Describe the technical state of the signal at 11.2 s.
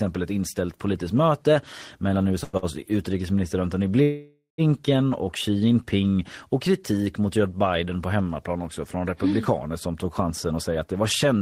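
At 11.2 s you're in a jitter buffer speed-up running from 10.24 s, right after "republikaner mm som tog", to the end. The receiver drops pitch-period slivers, roughly a tenth of a second in all, so the speech hurries along at about 109% with unchanged pitch.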